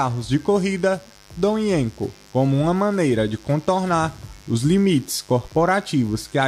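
Switching spikes from the 50 Hz mains supply leak into the signal path from start to finish, twice per cycle, spraying harmonics up into the kilohertz range. The result is mains buzz: a steady, raspy drone sitting roughly 30 dB below the sound.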